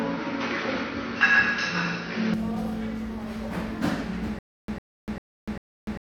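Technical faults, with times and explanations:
0.00–2.34 s, input switched to a poorer device: the everyday sounds start dull and boxy, with nothing above 6.2 kHz and background noise roughly 30 dB below the signal, then open out at 2.34 s with no gap and a level shift of around 5 dB. This likely comes from the system recording first through a narrower-band microphone or headset profile before changing inputs. On a spectrogram the top is cut off flat at 6.2 kHz until 2.34 s, where the full band suddenly appears. The waveform's envelope steps at that moment.
4.39–6.20 s, stutter with silent gaps: from 4.39 s to the end, the same 102 ms burst returns four times, each followed by about 295 ms of dead silence, an even cycle of roughly 397 ms. The likely cause is a stalled player or stream that replays its last fragment on each retry and then runs dry, so the sound that should have continued is lost. 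The waveform shows identical short blocks separated by flat silent stretches. On a spectrogram these appear as repeated matching slices with blank columns between them.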